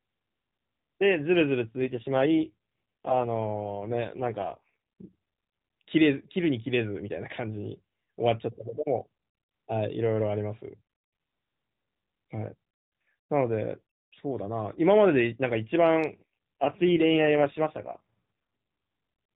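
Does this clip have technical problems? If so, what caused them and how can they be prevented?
Yes. From 1.78 to 5.09 s and again from 16.10 to 18.21 s the speech turns rougher and more synthetic, with no gap and no change in bandwidth. This is an AMR rate drop, which fits the codec stepping down from 12.2 to 4.75 kbps to spend bits on error protection over a weak radio link. A stronger, more stable mobile signal prevents it.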